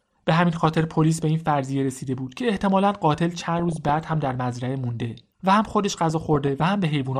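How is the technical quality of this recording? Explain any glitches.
Technical quality is poor: the speech is dull and granular throughout, and three bursts of bubbling corruption break through.

MP2 compression, throughout: the sound is muffled with a gurgling, grainy edge, likely from MPEG Layer II coding at a low rate, around 80 kbps, starving and switching off upper sub-bands.

DAB burbling, at 0.55–0.81 s, 3.57–4.33 s and 6.10–6.65 s: muddy bubbling and squelchy chirps, as weak-reception bit errors, worst in the middle burst, corrupt sub-band levels frame by frame.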